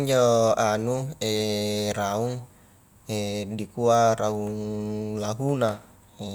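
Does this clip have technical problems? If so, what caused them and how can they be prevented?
No, nothing technical goes wrong anywhere in this speech clip, so there's nothing to trace back or prevent.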